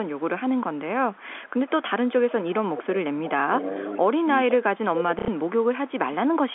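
From 0.05 to 0.24 s, 0.58 to 0.79 s and 1.12 to 1.7 s, a faint delayed copy of the speech sits under it. This is echo leak. It trails by about 447 ms, very quiet, around 30 to 35 dB down. From 2.07 to 3.31 s the copy returns at about 513 ms and much louder. A far-end echo canceller likely left part of its loudspeaker pickup in the return path.

From 3.47 to 4.78 s the main speech dips in pieces, about 15 dB at worst, roughly 300 ms in all. This is speech suppressed in double talk. The canceller likely turned its own talker down along with the loudspeaker echo while they overlapped.

The 513 ms echo leak continues at 3.84 to 3.97 s, 4.51 to 5.93 s and 6.35 s to the end. It is loudest in the long stretch, only about 10 dB under the speech.

At 5.19 to 5.28 s, 90 ms of audio was lost. This is packet loss with last packet repeated. The last piece replays as a brief robotic stutter. That fits three 30 ms packets. 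It rides on the narrow 250 Hz to 3.5 kHz band of the G.711 line.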